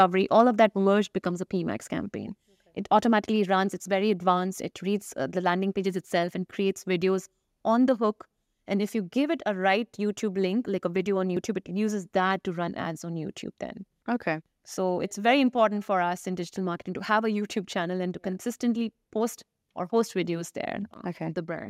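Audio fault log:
0.00–0.03 s and 0.39–0.41 s, microphone overload: harsh crackle on peaks, likely from input gain driving the converter to its limit; waveform tops flattened, the second about 1 dB over, with broadband smearing on the spectrogram.
1.02 s, microphone volume stepped down: the level falls about 2 dB at once, likely automatic gain reduction after those peaks; waveform envelope steps lower, the spectrogram dims evenly across frequencies.
3.85 s and 11.37 s, dropped buffer (overrun): the sound jumps ahead, likely from unread samples being overwritten; roughly 20 ms and 40 ms vanish, leaving a waveform discontinuity and a thin vertical spectrogram line.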